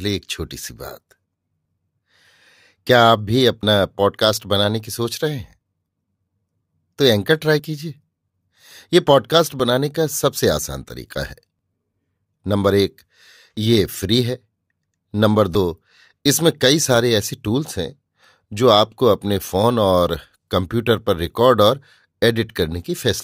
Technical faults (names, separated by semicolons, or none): overlap between stream segments